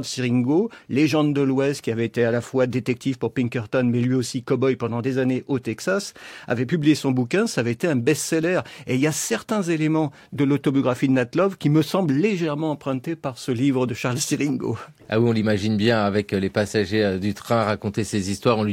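No technical faults can be heard anywhere in the recording.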